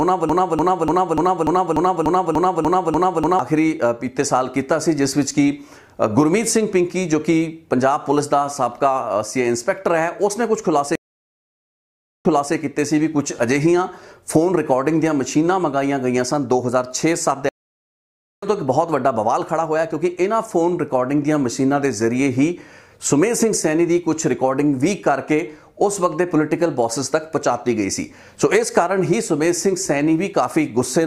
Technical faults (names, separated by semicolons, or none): broken-record loop; stream reconnect